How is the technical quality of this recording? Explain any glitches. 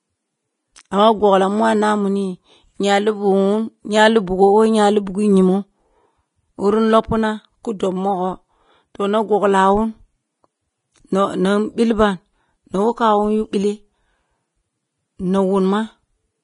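Quality's held back by heavy lossy coding. Throughout, the speech sounds hissy and grainy, with nothing above 10.6 kHz, likely Vorbis compression, at a low bitrate, near 29 kbps, coarsely quantising the treble into noise.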